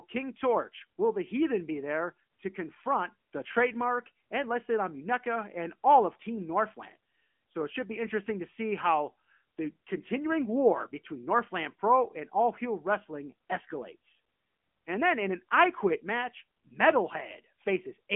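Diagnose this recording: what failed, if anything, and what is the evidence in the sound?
The speech sounds thin and boxed-in for the whole clip, with a buzzy, synthetic edge on voiced sounds and nothing audible above about 3.5 kHz. Low end below roughly 200 Hz is gone too. The failure is at the codec stage: AMR narrowband mobile codec, AMR-NB. It resamples to 8 kHz and rebuilds each 20 ms frame from a vocal-tract model fed by sparse pulses. That damage is plainly audible, and the texture fits a higher-rate mode near 10.2 kbps.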